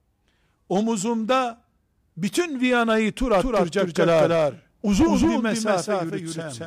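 From 3.38 s to the end, a doubled audio track appears: an equally loud, undecayed copy trails by around 200 ms, likely from a second, slower capture path.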